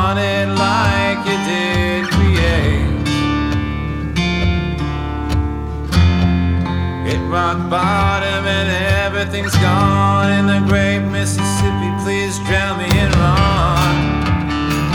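From 11.08 to 12.57 s, a filter restarted on every block: it lost its state at each block boundary and began again from silence, leaving a small transient every 20 ms. The result is a 50 Hz buzz riding on the sound, rising and falling with its level.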